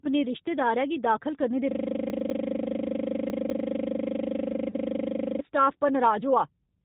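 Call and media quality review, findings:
G.729 codec throughout: 8 kbit/s CELP coding rebuilds the speech from a vocal-tract filter, pitch predictor and sparse pulses. Band-limited below 4 kHz, with a rough, synthetic edge on the voice. Codec damage plainly audible across the whole clip.

System hang loop, 1.71 to 5.40 s: host or audio driver stalled while the hardware kept cycling the same 40 ms ring-buffer region. One 40 ms slice repeats exactly, producing a steady 25 Hz buzz-stutter for nearly four seconds.

Chunks out of order, 2.1 to 2.3 s: a 100 ms chunk was written one chunk late, playing after its successor. Nothing missing, but the sequence is swapped and audibly jumbled, with hard joins at the seams.

Chunks out of order, 3.3 to 3.6 s: a 100 ms chunk landed two chunks late, so it follows material that should come after it. Garbled, scrambled moment with three abrupt joins.

VoIP packet loss concealed by the speech codec, 4.71 to 4.75 s, just after "रिश्तेदारै गी दाखल करने": decoder extrapolated the last pitch and filter across a gap that fits a single lost 10 ms frame. 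Brief stretched, fading sound, with weakened audio for tens of milliseconds as the decoder recovers.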